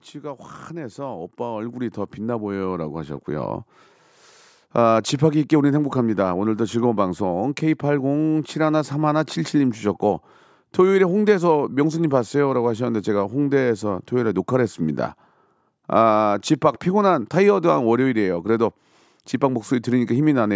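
A speech recording in which voice and background swell upward together from 0.11 s to 7.67 s, ending about 14 dB louder than at the start, a slow climb rather than any sudden jump. This is automatic gain rising: the call's gain control judged the input too quiet and kept increasing its amplification over those seven and a half seconds. The audio also passed through call microphone processing, which shows in the lack of content above 8 kHz.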